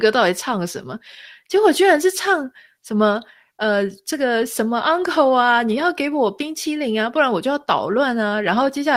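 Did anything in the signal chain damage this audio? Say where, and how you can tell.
No, nothing in the signal chain has damaged this audio. No stage, from the analogue wiring and converter through to storage and playback, leaves an audible mark on this speech recording.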